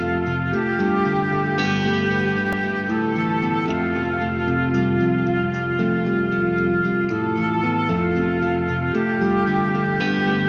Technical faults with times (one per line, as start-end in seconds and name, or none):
2.53 repeated buffer